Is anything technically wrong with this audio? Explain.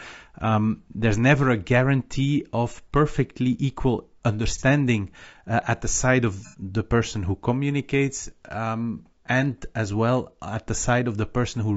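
Yes, two faults are audible in this speech clip.

Low-delay AAC compression runs throughout: the speech sounds rough and grainy, with noise between harmonics. This is likely AAC-ELD, whose short frames resolve pitch poorly and, at a rate of around 32 kbps, leave plainly audible codec damage.

AAC frame loss with concealment occurs at 4.58–4.63 s and 6.47–6.56 s: lost audio blocks were rebuilt by the decoder from the preceding spectrum, so each gap, 30 ms and then 60 ms, becomes a brief smeared, noisy or phasey patch.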